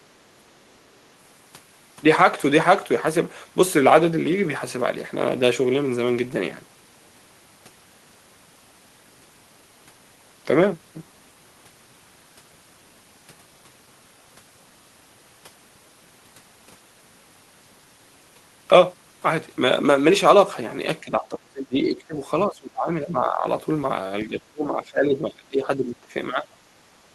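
Toward the end of this speech, the level keeps getting pulled down in chunks: from 21.01 to 22.17 s, 22.48 to 23.47 s, 24.25 to 26.13 s, and a short blip at 26.31 to 26.47 s. It dips hard, about 25 dB at worst in the first stretch and milder after that. It sounds like speech suppressed in double talk, most likely an echo canceller that couldn't tell the talker from loudspeaker echo and ducked everything together.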